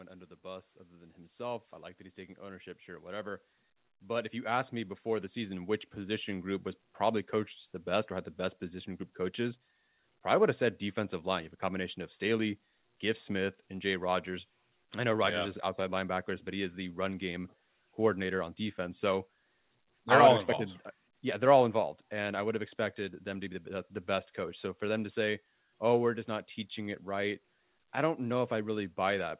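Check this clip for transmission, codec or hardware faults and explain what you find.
One fault is audible: automatic gain rising from 0.41 s to 6.59 s, just after "under the" and ending before "was probably coached the". The gain control judged the input too quiet and raised its level by about 15 dB, so voice and background swell together. The call-path band limit at 4 kHz, consistent with G.711 A-law telephony coding, is not treated as a fault.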